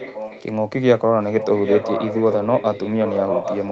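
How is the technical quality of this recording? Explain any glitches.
The recording has an echo leak. From 0 to 0.44 s, and again from 1.26 s to the end, a copy of the speech returns about 0.8 s late. This is likely an echo canceller missing loudspeaker sound. The echo sits roughly 10 dB below the speech at first, then only about 5 dB below.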